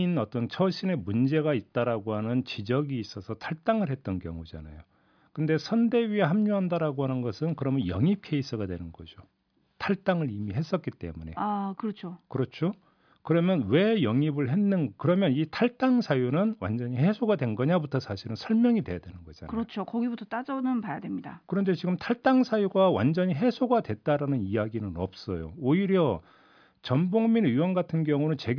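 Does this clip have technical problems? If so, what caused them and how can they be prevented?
No, there are no technical problems to hear in this speech clip. Since nothing went wrong, there is nothing here that needs preventing.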